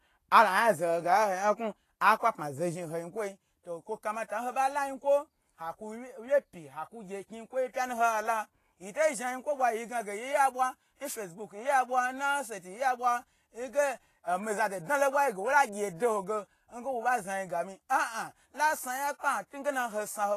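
Speech throughout with plainly audible Vorbis compression, likely from low-bitrate encoding around 32 kbps: the treble sounds hissy and grainy, with roughened tones. A spectrogram shows a hard ceiling near 14.2 kHz and speckled, noise-like texture in the upper bands.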